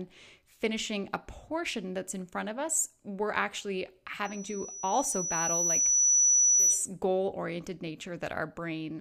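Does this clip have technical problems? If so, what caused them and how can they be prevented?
Yes. Just after "of us we're actually", at 4.25 s, a single piercing tone near 5.9 kHz starts to rise and swells over about two seconds into a squeal sitting roughly 10 dB above the speech, cutting off at 6.88 s before "goal oriented". This is loudspeaker feedback squeal: the microphone was picking up the loudspeaker it feeds, and at 5.9 kHz the loop's gain exceeded one, so that frequency fed on itself and grew by itself. It can be prevented by keeping loudspeakers out of the microphone's pickup, lowering the gain, or notching out the 5.9 kHz ring frequency.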